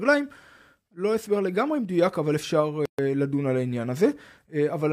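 At 2.85 s the speech drops into a gap at a join of encoded pieces: a gap of about 131 ms, ending at 2.99 s. Two separately encoded segments were butted together with the encoder's start delay and final-frame padding left in. The waveform shows a flat dropout, and the spectrogram a clean vertical blank band with smeared edges, before the sound resumes exactly where it stopped.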